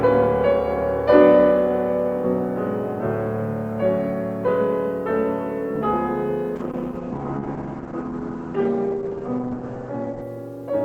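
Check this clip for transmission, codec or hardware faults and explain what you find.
One fault is present, a call bitrate drop. From 6.6 s to 10.33 s the sound turns rough and watery, with its top end cut off above 8 kHz instead of reaching 20 kHz. The encoder was starved of bits, which fits a fall from about 32 kbps to about 9 kbps.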